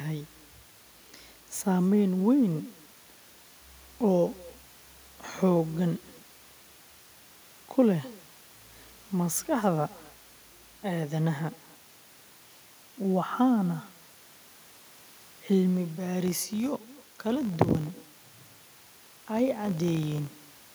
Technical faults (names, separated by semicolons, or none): echo with no canceller; filter restarted on every block